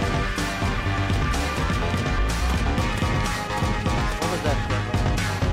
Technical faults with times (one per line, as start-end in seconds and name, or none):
none